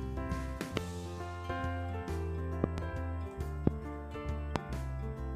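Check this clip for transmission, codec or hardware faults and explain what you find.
Five loud pops stand out, a hardware-type fault. They fall at 0.77–0.79 s, 2.64–2.80 s (a double pop), 3.67–3.69 s and 4.56–4.58 s. Each is a sharp thump roughly 25 dB above the sound, which continues beneath it. The likely cause is a brief voltage pulse, such as static, a switch or a driver glitch, shaped by the downstream circuitry.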